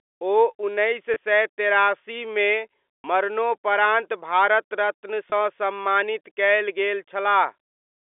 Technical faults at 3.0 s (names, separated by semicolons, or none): packet loss with pitch repetition